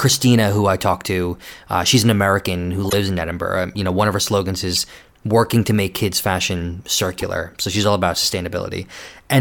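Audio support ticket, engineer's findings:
Corrupt frame decoded, speech track, three events: 2.85–2.95 s, a loud glitch with error peak around -5 dBFS spanning a few codec frames; 4.75–4.83 s, between "one of her slogans" and "working to make", similar glitch; 7.18–7.23 s, quieter, shorter glitch. Component: decoder input. Damaged bitstream frames were decoded anyway, misread gains and codes putting energy at wrong frequencies. Unlike packet-loss concealment, which leaves gaps or smeared repeats, this adds foreign energy.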